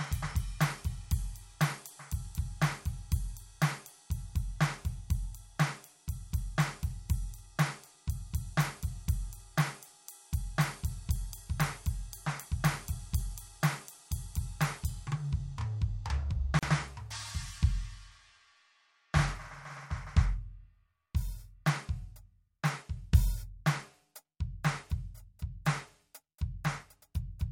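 A piece of music that drops out abruptly for about 38 ms, from 16.59 to 16.63 s, leaving a brief hole of silence in otherwise continuous sound before the music resumes exactly where it left off. The edges are smeared by the codec, which shortens the truly silent part. This is a gap at a join of encoded pieces: the music was encoded in separate sections and spliced without trimming, so one section's padded final frame and the next section's encoder start-up silence both remain at the seam.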